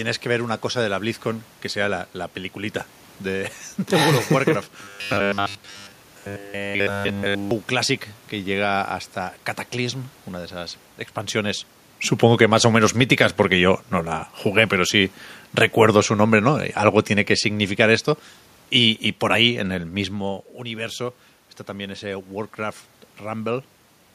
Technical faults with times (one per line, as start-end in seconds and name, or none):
4.83-7.51 robotic sound from repeated short buffers
12.15-19.59 automatic gain falling